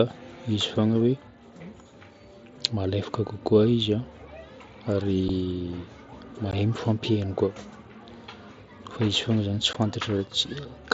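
Unconcealed Bluetooth headset packet loss punches abrupt holes at 5.28 s (7.5 ms), 6.51 s just before "mifampihaino koa", and 9.73 s (15 ms each), one or two dropped headset packets with nothing filled in.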